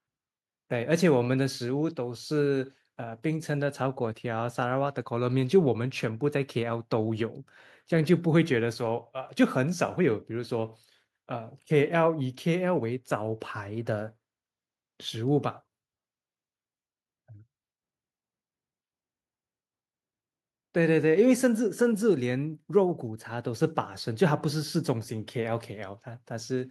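No technical faults can be heard anywhere in the recording.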